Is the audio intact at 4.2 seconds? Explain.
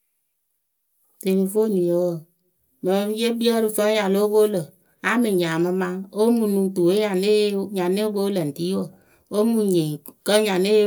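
Yes, the speech at 4.2 seconds plays through intact, with no dropout, click, distortion or other fault at that moment.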